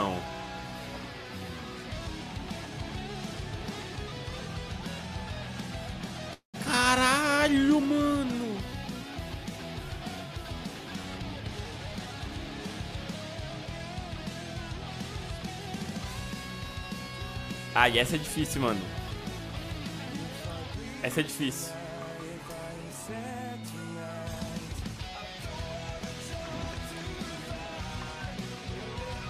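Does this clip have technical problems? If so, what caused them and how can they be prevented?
Yes. A call audio freeze runs from 6.33 to 6.56 s: the sound stops and the final instant is stretched into a fading buzz, then about 130 ms of silence, before the audio picks up where it left off with nothing lost. This is likely packets held up in transit draining the jitter buffer, so the whole stream arrives about 203 ms late. A more stable network path, or a larger jitter buffer target, prevents this.

A jitter buffer speed-up follows from 11.17 to 12.29 s, where the sound plays at 118% speed with unchanged pitch and feels hurried. The receiver, holding more audio than it wanted after the late packets, cut tiny pitch-period slices over and over, removing roughly a fifth of a second. Reducing the delay spikes, or letting the buffer shrink more gradually, prevents it.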